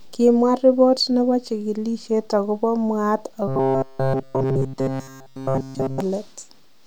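Robotic sound from repeated short buffers runs from 3.48 to 6.00 s, right after "nebo chigilisiet agobo mwaat", turning the speech into a rigid metallic buzz at 133 Hz throughout. The likely cause is starved playback looping a roughly 7.5 ms fragment while real audio is skipped.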